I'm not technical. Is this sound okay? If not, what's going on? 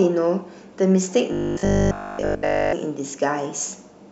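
No. From 1.33 to 2.73 s the speech turns into a rigid, metallic buzz, robotic sound from repeated short buffers. The likely cause is audio arriving too slowly, so short 20 ms scraps repeat throughout, forcing a steady 50 Hz drone.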